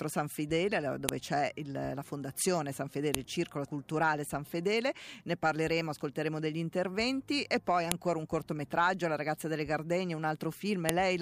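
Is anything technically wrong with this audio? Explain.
Yes. There is a file header played as audio at 1.09, 3.15, 7.92 and 10.89 s. Each is a sharp, loud snap where joined pieces kept their headers, so those bytes play as samples. Unlike a splice discontinuity, the snap's size doesn't depend on the surrounding sound.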